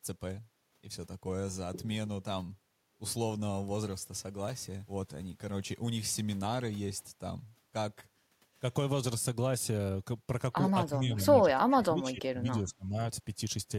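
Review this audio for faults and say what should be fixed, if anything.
Speech suppressed in double talk at 11.01 to 11.25 s and 11.61 to 12.97 s. The speech dips by roughly 10 dB, then much deeper, around 25 dB. The waveform's envelope visibly collapses, and the spectrogram shows faded, patchy bands. This is likely an echo canceller ducking the near talker because it could not separate the near talker's speech from the overlapping far-end echo. To prevent it, tune the canceller's double-talk detection so the local talker's path stays open when both sides speak at once.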